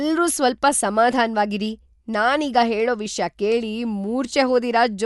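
From start to finish the speech sounds dull and nothing comes through above about 11.5 kHz, with a rough, fluttery hiss around the voiced sounds. That's likely Dolby Digital compression at a low rate, something like 64 kbps, with empty bands filled by dither noise.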